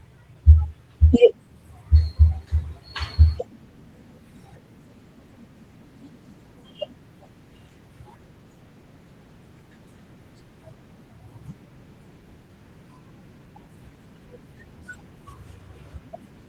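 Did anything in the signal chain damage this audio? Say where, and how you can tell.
No, nothing in the chain damaged this speech; it went through Opus voice compression in hybrid mode at 20 kbps, which keeps the full band and leaves only the light coding texture expected at that rate.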